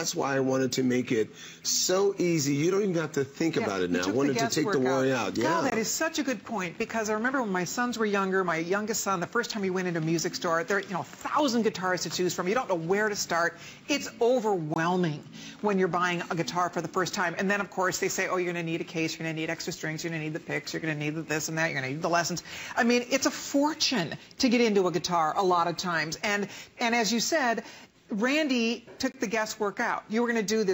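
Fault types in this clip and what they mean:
Block of digital silence: at 5.7, 14.74 and 29.12 s, the sound cuts out for 20 ms with no fade, heard as a short hole, likely from an unfilled output buffer.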